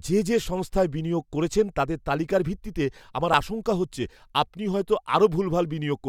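A repeated buffer occurs at 3.33 s in this speech clip. New audio did not reach the playback device in time, so it played the piece it already held one more time. The repeated segment is only about 10 ms long, which fits a 10 ms buffer, so the hard join sounds like a brief click or buzz rather than a stutter. Roughly 10 ms of fresh audio is skipped where the repeat fills the gap.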